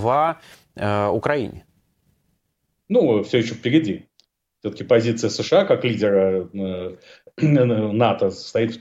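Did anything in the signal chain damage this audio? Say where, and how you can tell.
Yes. The damage sits at the converter stage: sample clock jitter runs from 0.0 to 6.16 s. A faint hiss and roughness rides on the speech, growing on louder passages and on sibilant, high-frequency sounds and dropping away in the gaps. That tracking of waveform slope points to a clock wandering by about 0.7 microseconds, so samples land slightly early or late, leaving an error roughly 50 dB below the signal.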